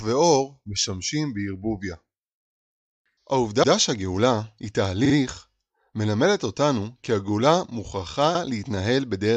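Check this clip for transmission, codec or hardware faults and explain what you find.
Repeated frames occur three times. A short run of compressed frames was delivered more than once, so the decoder replays the same slice of speech and the stream grows longer. At 3.62 to 3.72 s a 93 ms block plays twice. At 5.04 to 5.13 s a 46 ms block plays three times in a row. At 8.34 to 8.41 s a 70 ms block repeats once. Each is heard as a brief stutter.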